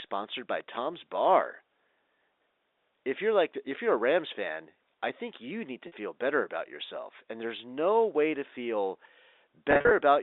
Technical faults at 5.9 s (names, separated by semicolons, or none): packet loss with pitch repetition